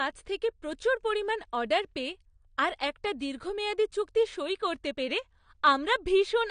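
AAC compression throughout: the speech sounds dull and smeared, with nothing above 9.7 kHz, likely from AAC-LC coding at a low bitrate around 32 kbps.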